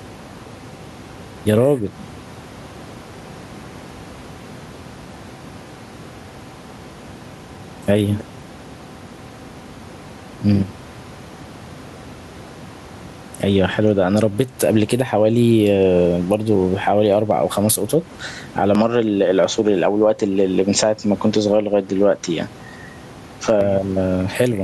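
Gain pumping runs through the whole clip: the level ducks by roughly 10 dB under loud syllables, likely from a fast limiter, visible as a breathing waveform envelope. From 18.75 to 23.61 s the input is likely switched to a poorer device: the sound dulls without a gap or level jump, and the spectrogram shows everything above 7.6 kHz cut off.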